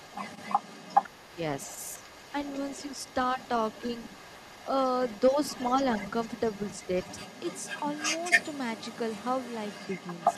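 From the start to the end, the other side's voice leaks through faintly, about 15 dB under the talker. A loudspeaker echo the canceller likely missed is the cause.

At 1.27 to 1.38 s, and again at 5.31 to 5.37 s, speech is suppressed in double talk. The talker dips briefly, about 10 dB, then about 5 dB. Overlapping talk likely caused it.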